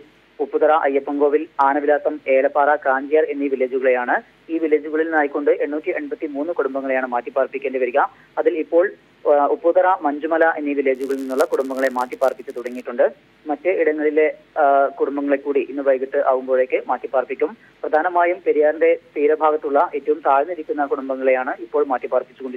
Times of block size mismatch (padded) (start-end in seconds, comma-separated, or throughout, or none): 10.94-12.86